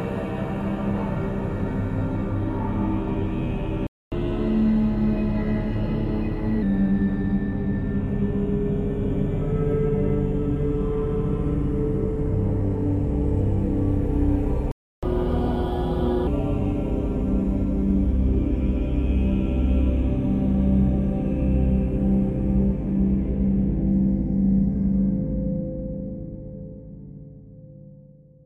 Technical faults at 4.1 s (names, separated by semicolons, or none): playback stall; catch-up at higher speed